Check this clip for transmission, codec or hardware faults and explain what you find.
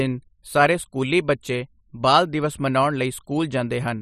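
One fault stands out in the speech: a single click at 3.40 s, just after "ਦਿਵਸ ਮਨਾਉਣ". It sounds like dropped samples, likely a stream that lost roughly one sample, a tiny fraction of a millisecond. The waveform skips from one value to a later one, leaving a step discontinuity. That sudden jump is heard as a brief click with no sound missing. A spectrogram shows a thin vertical line across the frequency range at that instant.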